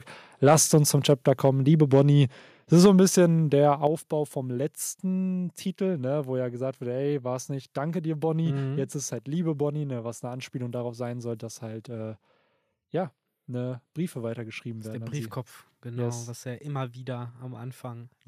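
Between 0.45 and 0.78 s, 1.09 and 1.49 s, 1.93 and 2.01 s, and 2.73 and 2.86 s, the loudest syllables turn harsh and crackly. This is microphone overload: input gain was likely set too high, so peaks exceeded the converter's ceiling by about 2 to 4 dB and had their tops flattened. At 2.86 s, right after the last distorted peak, the microphone volume stepped down. The whole signal, background included, drops abruptly by about 4 dB, and at 3.87 s it drops again by about 7 dB. This is likely the call software cutting the device's input gain after detecting clipping.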